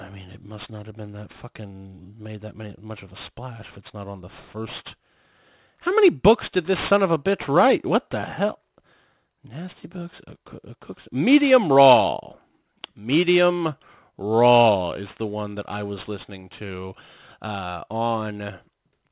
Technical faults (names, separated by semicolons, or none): aliasing